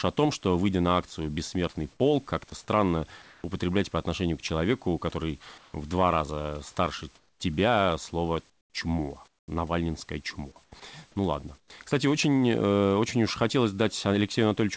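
From 1.92 to 3.44 s, comfort noise replaces the background in the pauses, about 320 ms of it in total. The room noise gives way to a steady, featureless hiss. The likely cause is discontinuous transmission, where the sender stops sending during pauses and the receiver fills the gap with synthetic noise shaped roughly like the background. Inside that stretch, at 2.50 s, about 10 ms of sound drops out, likely because the voice detector misread it as background. That short piece turns into the same flat noise.

The comfort noise returns from 5.58 to 5.74 s, where the background sits about 32 dB below the loudest speech and the fill is about 3 dB quieter than the real room tone. From 7.18 to 7.40 s, with the background about 37 dB down, the substitute drops about 10 dB, so the pause audibly sinks. Longer patches follow from 8.50 to 9.48 s (about 440 ms replaced) and from 10.64 to 11.70 s (about 220 ms). 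At 10.80 s another 10 ms of sound drops out to the noise.

The G.722 call path's band limit at 8 kHz applies throughout.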